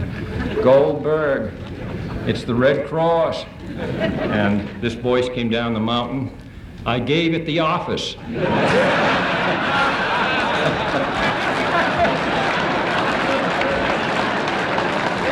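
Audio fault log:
No faults are audible anywhere in this audio.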